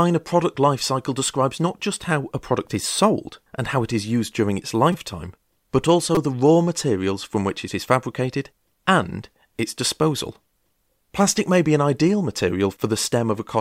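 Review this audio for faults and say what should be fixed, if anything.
Repeated buffer at 4.92–4.94 s and 6.15–6.17 s: fresh speech arrived late, so the same 5 ms slice played four extra times, which fits a buffer of about 5 ms, with essentially no audio lost. Each event is heard as a brief buzz near 200 Hz. On a waveform, each shows identical 5 ms cycles with hard joins. On a spectrogram, each appears as a narrow vertical band with harmonic stripes spaced about 200 Hz apart. A larger output buffer or a higher-priority audio thread would prevent it.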